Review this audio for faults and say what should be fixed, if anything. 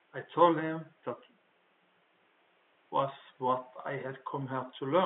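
Nothing here needs fixing; there's just a touch of ordinary room noise sitting about 39 dB under the speech, which comes from the recording space rather than the system.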